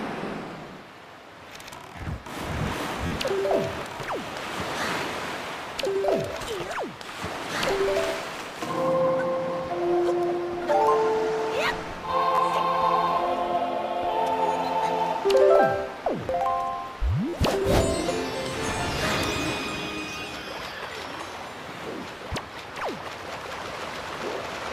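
At 3.07 s, 12.35 s and 17.29 s a repeated buffer occurs: data arrived late, so one slice of about 11.6 ms, which fits a 512-sample buffer, replays four, two and four extra times, giving a brief buzzy stutter. The waveform shows identical repeating segments, and the spectrogram shows vertical lines at each hard join.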